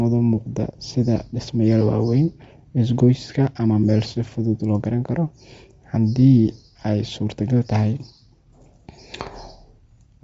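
From start to finish the speech has nothing above about 7.7 kHz, and what remains up top has a breathy, grainy fizz, plainly audible. That's most likely Bluetooth LC3 compression. The encoder discards much of the upper spectrum and fills the gaps with shaped noise, which produces the grit. The dulled top and that texture point to a low rate, around 32 kbps, with 10 ms frames.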